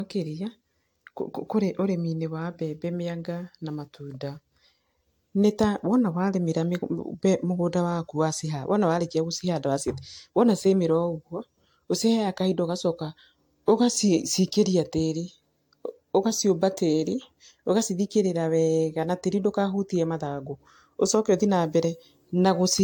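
Generation loss runs through the speech clip. It sounds swirly and hollow, and attacks blur. Nothing is heard above 19.1 kHz. The likely cause is about four lossy passes, pointing to AAC-LC near 96 kbit/s. Each pass re-quantises differently, so noise and holes pile up.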